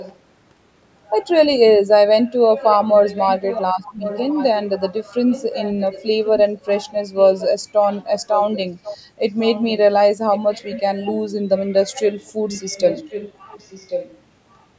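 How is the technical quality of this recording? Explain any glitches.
The main problem is echo leak: a delayed copy of the speech keeps trailing behind it. It shows up at 0.0 to 0.19 s, 2.59 to 4.69 s, 5.3 to 6.6 s, 7.16 to 8.98 s, 9.41 to 9.81 s, 10.32 to 11.13 s and 11.94 to 14.21 s, always lagging by about 1.09 s. The likely cause is a far end on speakerphone whose echo canceller let some of our audio get back into its mic. The echo sits roughly 10 to 20 dB under the speech, loudest in the 2.59 and 7.16 s stretches. The band tops out at 8 kHz, as expected from call mic processing.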